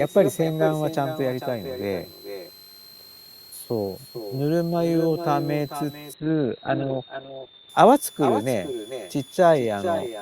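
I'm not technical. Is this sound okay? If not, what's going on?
No, there are three problems in this speech recording.

The first is a switching supply whistle. A power adapter or similar supply in the recording chain is running in a mode that makes a sound we can hear. It is a thin, high whistle around 4 kHz. It sits quietly under the speech, and its pitch wanders between about 3.4 and 4.3 kHz. It is there for the whole clip.

The second is echo with no canceller. At the other end of the call, the sound came out of a loudspeaker and went back into the microphone. Nothing removed it. So every phrase is followed about 0.4 seconds later by a quieter, thinner copy. That copy is only a little softer than the original. It lasts from start to finish.

The third is a call bitrate drop, from 6.14 to 7.75 seconds. The connection suddenly had less room, so the call software squeezed the sound much harder. 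It also threw away the higher frequencies. The sound went from full range, up to about 20 kHz, to stopping near 4 kHz. For that stretch the speech sounds muffled, rough and a bit watery. Then the quality comes back.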